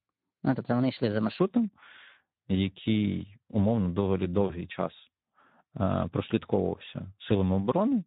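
Right from the start and all the way through, you can hear the Speex codec at work. The speech has that hoarse, grainy CELP quality, with the excitation starved of bits so the voice goes noisy and hoarse. The top end is just a shaped hiss rather than real detail. The amount of damage fits a rate of around 11 kbps.

From 0.0 to 1.39 s there's a section at the wrong speed. The speech runs 1.2 times fast, so it's hurried and sits about three semitones high, then settles to normal pitch and pace after that point. Since speed and pitch shift together like that, it's most likely the stretch was played or rendered against the wrong clock rather than deliberately sped up.

Just after "який умовно доволі", from 4.48 to 4.56 s, there's VoIP packet loss concealed by the speech codec. The decoder had nothing to work with for a moment and stretched its last pitch and filter state over the gap, fading it out. 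The gap itself fits a single lost 20 ms frame, but the voice stays weak or distorted for a few more tens of milliseconds while the decoder recovers.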